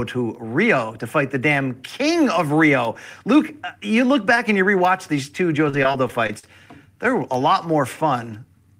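Repeated packet loss (robotic sound) runs from 5.69 to 6.44 s in this speech clip. Over that stretch about six short holes, the longest around 41 ms, are patched by stretching the preceding sound, roughly 136 ms in total and nearly a fifth of the span, leaving it choppy.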